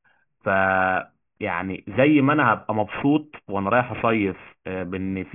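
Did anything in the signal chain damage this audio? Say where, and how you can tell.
Yes. Aliasing runs throughout, from a sample-rate conversion stage. Sibilants are gritty or metallic, and a spectrogram shows energy folded back below a hard 3 kHz edge, about 15 dB down.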